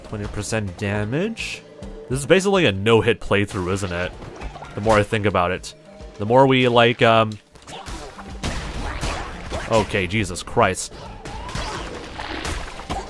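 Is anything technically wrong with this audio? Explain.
No, nothing technically wrong.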